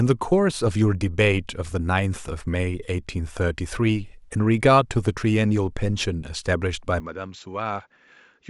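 At 7.0 s the speech abruptly turns duller and boxier, with nothing above roughly 7.6 kHz, and the level falls by around 10 dB while a faint new background noise appears, far below the speech. There is no gap at the change, and the narrowed sound continues to the end. This is likely an input switched to a poorer device, with the system moving to another microphone or a headset's call profile that passes a narrower band and carries its own level and noise.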